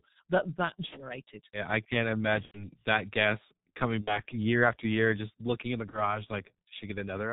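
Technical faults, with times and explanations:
throughout: G.723.1 codec. Nothing above 4 kHz comes through, so the speech is muffled. At a rate that fits the 6.3 kbit/s mode, the slowly updated voice model and 30 ms frames leave heavy hoarseness and blurred consonants across the whole clip.
0.86–1.05 s, 2.45–2.68 s, 4.01–4.19 s, 5.90–6.23 s: VoIP packet loss concealed by the speech codec. The decoder extends its last pitch and filter at falling gain, so each gap is a fading buzz or coloured noise. The gap after "I can't" fits three lost frames and goes quiet, and the sound stays weak after each gap.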